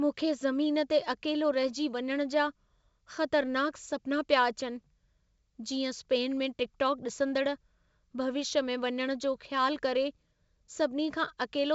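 No technical faults can be heard in the speech, which carries G.722 wideband telephone coding at 64 kbit/s with nothing above 7.7 kHz and at most faint coding damage.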